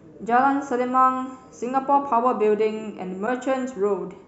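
Speech clip with a broken MP3 bit reservoir from 3.25 to 3.28 s. The sound skips forward and garbles for about 30 ms, roughly one 26.1 ms frame. The likely cause is a frame cut from the stream, leaving the next frame to decode borrowed bits from the wrong data.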